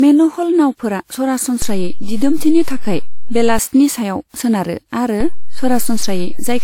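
From start to finish, the speech has a swirly, hollow, smeared quality, and consonant attacks lose their edges. This is generation loss. The sound was most likely decoded and re-encoded with a lossy codec around four times. Each pass quantised on a shifted frame grid, so noise piled up. It fits a WMA chain at 128 kbit/s. Nothing is present above 19.2 kHz.

At 1.62 s, just before "सायाव सोनारो", a low thump marks a DC step. The waveform's zero line jumps to a new offset. The offset holds until 3.59 s. At 5.21 s a second DC step thumps in, and that offset remains to the end. The speech itself continues unchanged through each jump.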